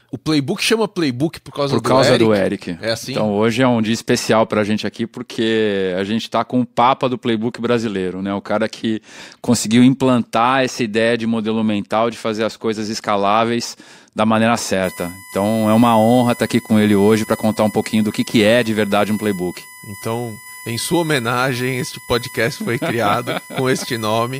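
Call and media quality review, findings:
USB whine from 14.84 s to the end, after "coisas escaláveis da maneira". Steady tone based on 1 kHz, strongest at its 2 kHz harmonic, roughly 20 dB under the speech. USB 1 ms frame current leaking into the audio path through power or ground.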